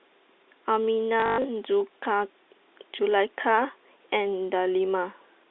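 From 1.2 to 1.44 s the speech breaks into a short robotic stutter, the sign of packet loss with the last packet repeated. About 160 ms of audio is missing across that 240 ms stretch, the longest gap running 120 ms, and the receiver fills each gap by replaying the previous packet. The replays don't align with the pitch, and the longest run buzzes at roughly 50 Hz, which fits 20 ms packets on this band-limited G.711 telephone line.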